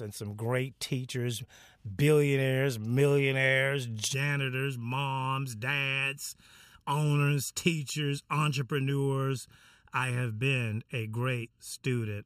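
From 4.14 s, right after "great teachers billionaires millionaires", and running to the end, the speech has channel delay (comb filtering). One channel lags the other by about 0.7 ms, and the mono sum cancels at regularly spaced frequencies. The first notch falls near 700 Hz and others repeat upward, so the sound turns hollow and phasey. A spectrogram shows fixed dark horizontal bands from that point on.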